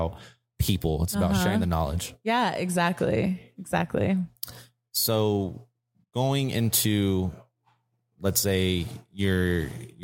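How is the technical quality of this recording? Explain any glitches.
The recording shows no technical glitches. Nothing in the speech clip stands out as a problem at any point.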